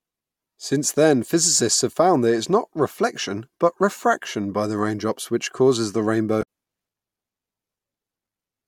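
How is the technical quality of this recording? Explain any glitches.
One glitch stands out in the speech, at 6.39 to 6.43 s: a brief burst caused by damaged data in a compressed stream. For about 46 ms the decoder received corrupted bytes, could not decode those frames properly, and had to resynchronise on the next valid frame header. The result is a short chirp, squawk, click or hole in the sound, usually with a jump ahead in the audio.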